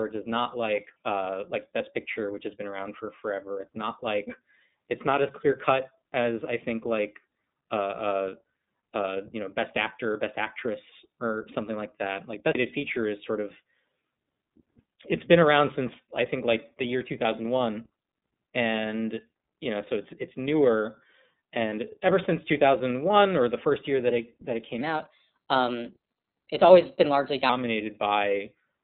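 iLBC codec coding runs from start to finish. The sound is confined to a telephone-style band of roughly 150 Hz to 3.7 kHz, with nothing above 4 kHz. Each short block of the speech is coded on its own, without leaning on the block before, and the character of the roughness points to the 30 ms frame mode at 13.33 kbps. The codec damage is plainly audible as a rough, slightly synthetic edge on the speech.

A CD skip occurs from 12.53 to 12.55 s. The player's laser has jumped to a different turn of the disc's spiral, so playback goes silent for about 20 ms and then carries on from another place on the disc. It is heard as a small tick followed by an abrupt discontinuity, as if a sliver of the recording had been spliced out or repeated, with no smooth join between the two sides.

A section at the wrong speed runs from 24.81 to 27.49 s, starting just after "that it that it". For those 2.7 seconds the audio plays 1.13 times faster than it should, so pitch and tempo rise together by about two semitones. 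The speech sounds hurried and slightly chipmunk-like, then snaps back to normal. The likely cause is that this stretch was resampled or played against a mismatched clock.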